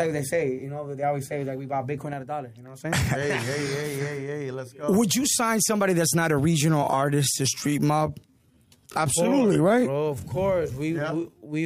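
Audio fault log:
6.54–11.66 s, time-stretched section: from 6.54 s to the end the pace abruptly drops to 0.68 times its earlier speed while the pitch stays put. Short fragments repeat to fill the extra time. This is likely software stretching the passage to fit a longer slot. Unlike slowed playback or tape drag, nothing sinks in pitch, and only the timing is drawn out.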